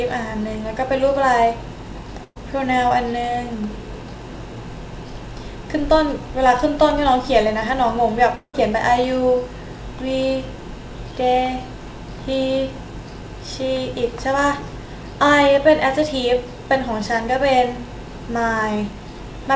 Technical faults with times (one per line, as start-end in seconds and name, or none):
2.24-2.37 burst of packet loss
8.35-8.55 long network dropout